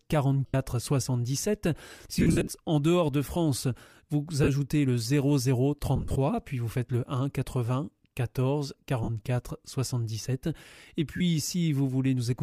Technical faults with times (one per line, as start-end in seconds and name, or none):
0.46-0.54 lost LE Audio frames
2.19-2.51 lost LE Audio frames
4.44-4.48 lost LE Audio frames
5.96-6.16 lost LE Audio frames
9.04-9.09 lost LE Audio frames
11.17-11.21 lost LE Audio frames